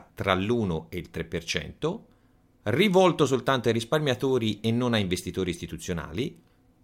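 No technical faults are audible.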